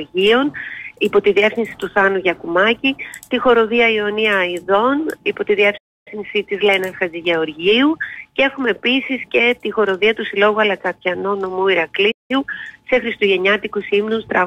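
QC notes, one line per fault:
5.77 s and 12.11 s: playback stall. The sound drops to silence for about 0.29 s, then 0.18 s, then resumes, likely because the player briefly ran out of data.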